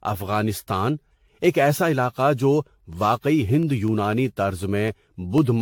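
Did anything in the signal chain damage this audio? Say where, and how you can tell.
Yes. At the codec stage, the speech sounds swirly, smeared and hollow throughout, with nothing above 18.6 kHz. That is likely generation loss from roughly ten passes through AAC-LC at around 96 kbit/s. Each re-encode quantises again on a shifted frame grid, which compounds noise and spectral holes and blurs attacks.

At the driver or buffer stage, periodic USB or driver dropouts appear from 3.63 s to 5.38 s. They are evenly spaced ticks every 0.25 s, seven or so in all. Each one is a gap of about a millisecond filled with silence, where something blocked the audio path at a fixed interval.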